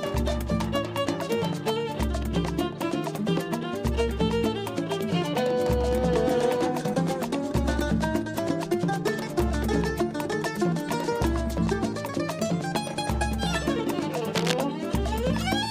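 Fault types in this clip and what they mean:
cable scratch noise: A worn cable or connector being moved likely makes its contact resistance jump rapidly, throwing dense, uneven noise bursts into the signal; here a rough scratching rides over the sound from 14.34 to 14.54 s, about 5 dB quieter than the sound itself.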